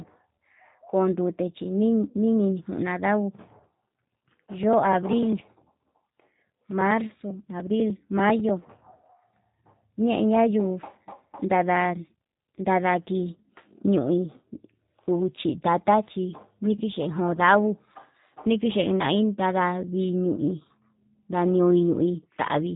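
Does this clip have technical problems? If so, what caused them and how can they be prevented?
Yes. Throughout, the speech sounds rough and synthetic, with nothing above 3.8 kHz. This is plainly audible G.729 codec damage, which fits an 8 kbit/s voice link. Use a wideband codec such as G.722 or Opus instead.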